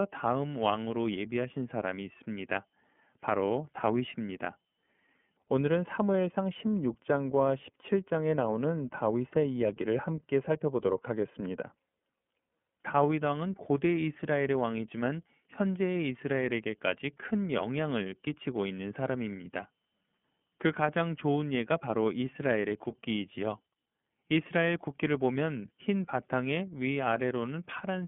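The clip is speech, and it passes through the iLBC codec for its whole length. The band is narrow, running from about 150 Hz to 3.4 kHz, with nothing above 3.6 kHz. Sibilants sound dull and the top end is missing. The codec damage is plainly audible. The speech has a rough, slightly synthetic texture, because each frame's excitation is coded on its own. That roughness fits 30 ms frames and the 13.33 kbps mode.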